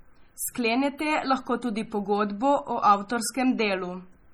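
From start to finish the speech carries heavy codec damage, most likely from MP3 compression at a low bitrate, which fits a rate around 32 kbps. With so few bits available, the treble is cut off at a fixed point and quieter frequency lines are dropped, flickering on and off between frames. The result is a dull, watery, swirling quality, with chirpy metallic edges on s sounds and smeared consonant onsets.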